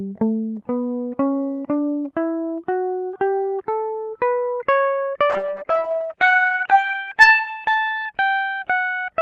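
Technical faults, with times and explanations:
5.32–8.35 s, call bitrate drop: the music turns rough, watery and dull, losing its top end, as if Opus fell from 32 to 12 kbps.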